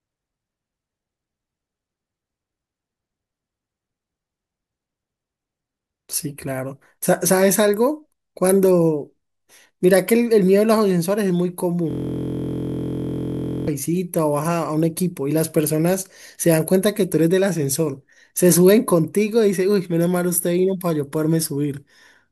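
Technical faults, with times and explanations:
11.9 to 13.68 s, system hang loop: the system froze and the output kept replaying one 23.22 ms slice of the speech, which fits a 1024-sample buffer, dozens of times over. That tight repetition fuses into a steady buzz at about 43 Hz.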